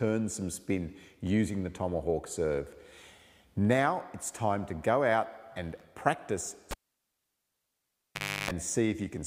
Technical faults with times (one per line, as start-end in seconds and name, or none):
6.71-8.51 cable pulled and plugged in